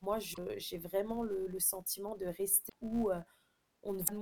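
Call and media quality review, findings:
Filter restarted on every block: state cleared per processing block, each block starting from silence. Small onset transient every block, heard as a 200 Hz buzz across the whole speech clip, tracking level. Consistent with a 5 ms block. Component: DSP filter stage.

Damaged data in a compressed stream: corrupted bytes at 4.04–4.09 s. Decoder misreads the frames, loses sync and hunts for the next header. Brief chirp or blip. Component: stream transport or file, upstream of the decoder.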